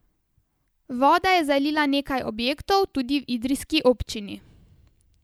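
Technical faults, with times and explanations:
No technical faults can be heard in this speech.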